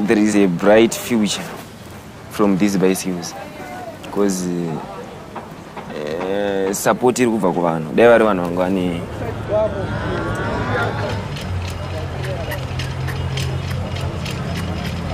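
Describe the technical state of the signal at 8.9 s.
At 8.9 s the signal is intact, with no audible fault at that moment.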